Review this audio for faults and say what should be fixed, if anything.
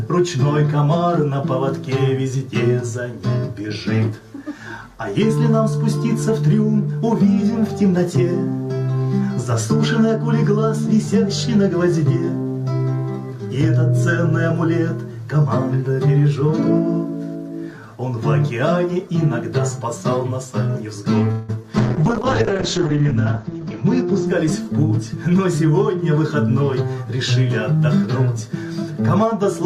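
At 21.31 s the sound stalls for about 0.19 s. It does not cut to silence. The last sound is stretched into a fading buzz or hiss for 171 ms. Then the audio resumes where it stopped. Nothing is lost, but everything after it arrives 171 ms later. This is a call audio freeze. Packets were likely held up in transit, so the jitter buffer ran dry and the receiver had to keep extending what it had.

From 21.62 to 21.65 s there is a brief smear. This is short concealed packet loss. About 40 ms of audio never reached the decoder in time. The receiver covered the gap with only 8 ms of continued sound, then blended back into the real signal. The skip also takes back roughly 30 ms of the delay added by the freeze. What is left is a quick smear or wobble rather than a clean gap.

From 21.79 to 25.99 s the sound turns rough and dull. This is a call bitrate drop. The connection's bandwidth estimate fell, and the encoder was pushed from 96 kbps down to 8 kbps. 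At the bottom, which lasts 1.28 s, Opus codes very coarsely. It also narrows the audio band from 20 kHz to 8 kHz, so the top end disappears. The result is muffled and watery until the rate climbs back.

From 23.43 to 25.58 s the audio runs hurried. The pitch stays put. This is a jitter buffer speed-up, running at 106% of normal speed. Delayed packets likely arrived in a burst and overfilled the buffer. To cut the extra delay, the receiver kept removing short pieces of one or a few pitch periods. In total it trimmed roughly 150 ms. It overlaps the low-bitrate stretch, so both faults are heard together.

To prevent all four, fix the network path's congestion and delay spikes so packets arrive steadily, the bandwidth estimate stays high, and the jitter buffer neither starves nor overfills.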